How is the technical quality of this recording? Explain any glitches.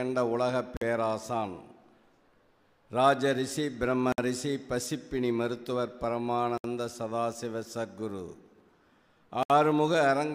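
The recording has four brief dropouts, at 0.77 s (47 ms), 4.12 s (58 ms), 6.58 s (66 ms) and 9.43 s (68 ms). Each is a gap at a join of encoded pieces: separately encoded segments were butted together with their encoder start delay and final-frame padding left in. Continuous sound cuts to silence with smeared edges, then resumes exactly where it stopped.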